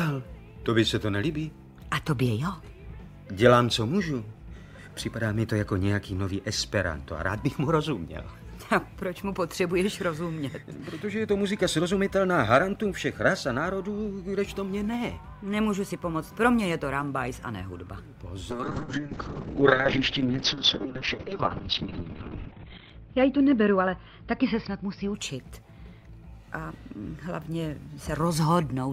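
From 18.51 to 25.70 s, a call bitrate drop starves the encoder: audio muffles to a 4 kHz ceiling and turns rough for 3.9 s.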